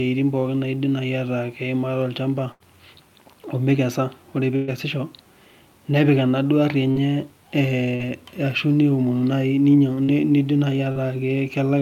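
Two bursts of packet loss come first, at 2.51 to 2.63 s and 4.56 to 4.71 s. About 80 ms and then 120 ms of audio never arrived, so the receiver stretched the last sound out, fading it as a buzz or hiss, before jumping ahead past the missing stretch. After that come four short concealed packet losses at 6.92 to 6.98 s, 7.95 to 8.02 s, 10.03 to 10.11 s just before "nidim naai", and 10.92 to 10.99 s right after it. Each drops about 40 ms, patched by continuing the previous sound, so you hear a quick smear or wobble, and a consonant can get swallowed.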